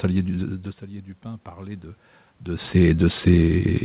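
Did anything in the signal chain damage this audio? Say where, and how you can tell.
Yes. Automatic gain rising in call processing, 2.44 to 3.77 s: after input fell about 17 dB, gain climbs about 6 dB, swelling waveform envelope and noise floor together.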